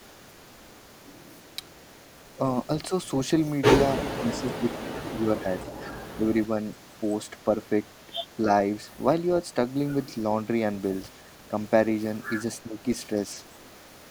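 The speech ducks from 3.95 to 4.68 s, dropping by roughly 15 dB at its deepest, then dips again from 5.11 to 5.48 s by around 10 dB and briefly at 6.16 to 6.27 s by a few dB. That pattern sounds like speech suppressed in double talk. The echo canceller most likely mistook the talker for far-end echo while both sides were active and pulled the level down along with it.

At 8.03 to 8.36 s there's a faint copy of the speech trailing 288 ms behind, sitting about 35 dB under the main signal. That's an echo leak. The far end's canceller likely failed to scrub its loudspeaker pickup fully, so a scrap came back.

One more short suppression dip follows from 12.63 to 12.88 s, about 10 dB deep, with the same clipped, ducked feel as the earlier ones.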